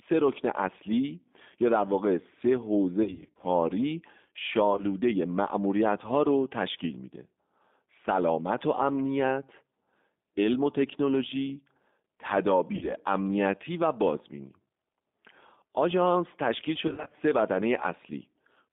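The whole clip carries the G.729 codec at 8 kbit/s. It models speech as a vocal tract filter driven by a pitch predictor and a few pulses per frame. The line passes only about 200 Hz to 3.6 kHz. The damage is plainly audible. Speech sounds rough, thin and slightly synthetic throughout.

VoIP packet loss concealed by the speech codec occurs four times. From 3.03 to 3.46 s, about 260 ms goes missing, scattered across 400 ms, with runs up to 60 ms. Short gaps recur from 4.71 to 4.84 s. Another 60 ms drops between 12.75 and 12.94 s. From 16.87 to 17.15 s, 130 ms is lost in runs up to 50 ms. Each time the decoder repeats its last pitch and filter at falling gain. The sound smears into a fading buzz or coloured noise, then stays weak briefly afterwards.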